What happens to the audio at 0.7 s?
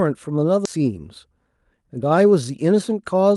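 At 0.65 to 0.67 s the speech skips ahead: roughly 0.7 s of audio was dropped, in transit or by an overflowing jitter buffer, and playback jumps straight to later audio with no gap. The waveform shows an abrupt seam, and the spectrogram a hard vertical break.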